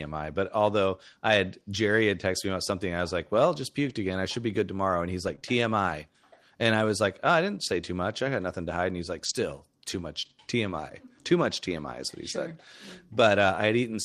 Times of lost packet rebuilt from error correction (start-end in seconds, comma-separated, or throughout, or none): 1.73-1.75, 3.85-3.91, 5.27-5.33, 9.25-9.35, 10.25-10.31, 11.51